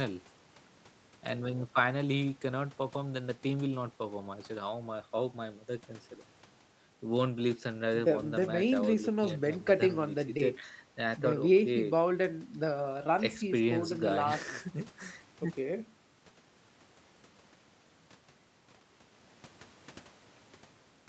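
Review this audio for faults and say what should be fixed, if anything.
Nothing in this speech recording needs fixing. Nothing is heard above 8 kHz, which fits a call path with the microphone processing and the Opus codec at its wideband setting.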